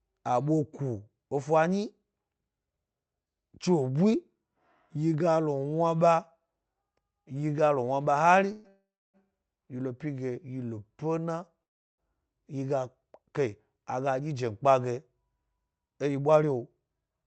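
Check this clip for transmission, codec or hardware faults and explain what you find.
Three call audio freezes and one jitter buffer speed-up are audible in this speech, carried over a call path whose band stops near 8 kHz, consistent with Opus at around 40 kbps.

Call audio freeze at 8.52 to 8.67 s, 8.68 to 9.17 s and 11.63 to 12.01 s: the sound stalls into a fading buzz, dropping to silence for about 0.26 s in the second and 0.34 s in the third. It then resumes where it stopped, nothing lost. The likely cause is delayed packets emptying the jitter buffer, so the receiver stretched the last sound.

Jitter buffer speed-up from 15.36 to 17.24 s: the speech sounds hurried, running about 11% fast at unchanged pitch. A delay backlog had built up, so the receiver repeatedly trimmed pitch-period slices, roughly a fifth of a second in total, to catch up.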